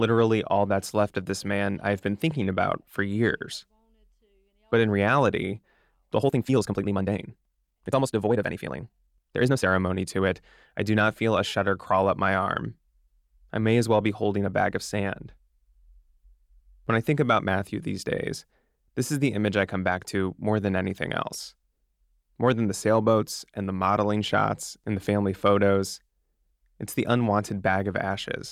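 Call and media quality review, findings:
Time-stretched section, 6.16–9.66 s. Speech suddenly rushed at about 1.66x pace, pitch unchanged. Likely cause: a time-stretch stage compressing the segment to fit a length, dropping short slices to hold pitch steady.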